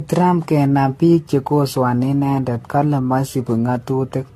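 From start to finish the speech has a swirly, hollow, smeared quality, with consonant attacks blurred and a watery shimmer around the voice, and nothing is present above 14 kHz. This is likely generation loss: repeated lossy coding, with a character that fits AAC-LC at around 64 kbit/s applied something like ten times over. Each re-encode quantised the sound afresh on a shifted frame grid, so noise and gaps accumulated. A spectrogram would show a hard ceiling at 14 kHz, patchy holes and smeared blocks in the upper bands, and softened transient edges in the waveform.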